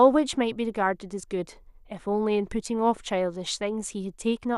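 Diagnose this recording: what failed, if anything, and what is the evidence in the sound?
Nothing failed here as far as I can hear; none of the stages in the chain leave any audible trace on the speech.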